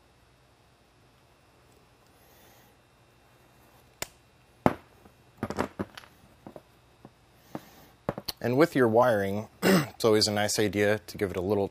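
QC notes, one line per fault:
9.03 s, dropped buffer (overrun): an abrupt forward jump in the sound and no gap of silence, most likely because the samples were not read out before the hardware overwrote them, so roughly 20 ms is skipped and the two edges butt together. On the waveform this shows as a sudden discontinuity where the trace steps to a new level. The spectrogram shows a thin vertical broadband stripe there.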